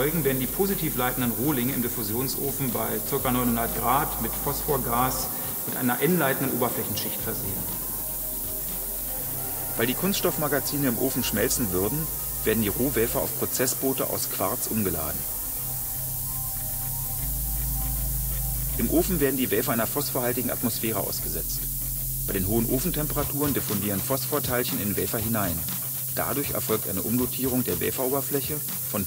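Low bit depth with noise shaping runs through the whole clip: the audio is quantised to only 4 bits, with the rounding error fed back and pushed upward in frequency. The result is a steady, thin hiss climbing sharply toward the treble, sitting close to the level of the sound itself.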